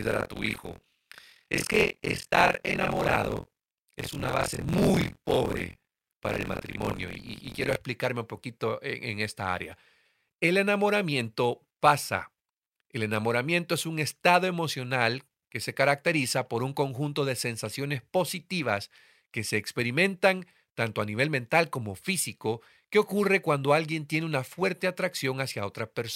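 From the start to 7.76 s the speech carries buffer tearing: a steady robotic rattle at about 43 Hz, which fits a 1024-sample buffer. The writing side and the playback side of the ring buffer have drifted into each other, so every period mixes fresh audio with a slice, a bit under half of it, left over from roughly 50 ms earlier. The hard joins at each edge of that stale slice produce the buzz, which is heard only while sound is present.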